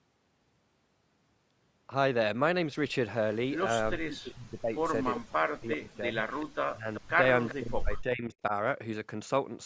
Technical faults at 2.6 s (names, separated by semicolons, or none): none